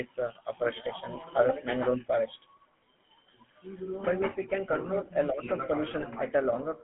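From start to finish the speech carries GSM full-rate codec damage, plainly audible. The sound is held to roughly 150 Hz to 3.4 kHz, and the pulse-driven vocal-tract model, which fits a 13 kbps GSM full-rate coder, leaves a buzzy, gravelly roughness over the speech.

From 5.98 to 6.07 s, GSM bit errors break the decoded speech into a brief squawk and gargle. Corrupted filter, pitch and gain values distort the spectrum and level of each affected frame, and the damaged span points to about four consecutive frames.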